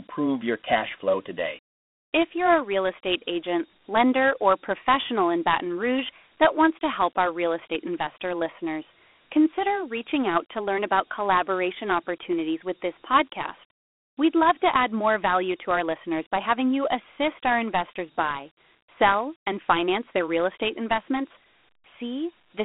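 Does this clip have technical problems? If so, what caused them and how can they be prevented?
Yes. Throughout the speech there is a gritty hiss trailing the voice, a thin phone-line band of roughly 200 Hz to 3.5 kHz, and nothing above 3.8 kHz. This is Dialogic VOX ADPCM: 4-bit adaptive coding, which fits a 32 kbps stream, coarsely tracks each sample step and leaves audible quantisation grit. To prevent it, record or export in a linear PCM format at a higher sample rate instead of a 4-bit telephony codec.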